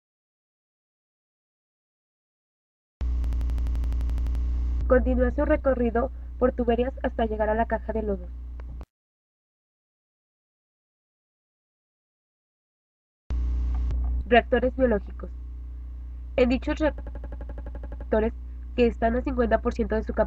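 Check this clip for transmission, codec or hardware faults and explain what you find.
Yes, there are two faults. A system hang loop occurs at 3.24–4.44 s and again at 16.98–18.09 s. The system froze while the hardware kept replaying one 85 ms buffer (which fits 4096 samples) 14 and 13 times, producing an 11.7 Hz machine-gun stutter.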